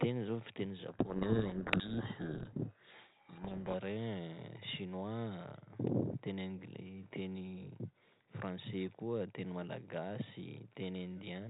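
A speech clip carried over G.726 ADPCM at 32 kbit/s, with telephone bandwidth and nothing above 4 kHz. From 0.9 s to 3.74 s there is a codec payload misread. The speech is buried under harsh, gritty distortion. The two ends disagree on the bit order of the G.726 code words. The decoder therefore applies each difference code with the wrong value. Its adaptive prediction drifts into error and the signal turns to rasping noise. It clears at 3.74 s, once both ends read the bits the same way again.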